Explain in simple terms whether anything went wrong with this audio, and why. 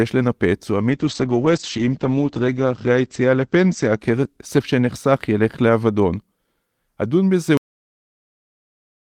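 From 0.9 to 5.73 s there is a call bitrate drop. The connection squeezed the speech into far fewer bits, so it sounds rough and muffled, worst for about 1.5 s.

At 7.57 s comes a cut-off end. The final stretch of audio was never played, so the speech stops abruptly mid-sound into dead silence.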